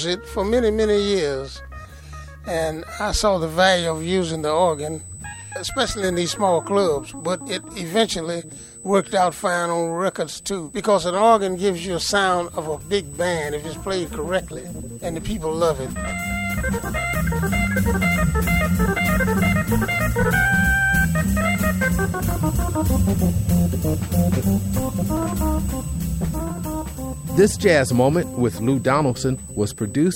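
From 3.67 s to the end, USB whine sits at a fixed 8 kHz, about 20 dB under the signal: current drawn in 125-microsecond microframes leaking into the audio through the power or ground.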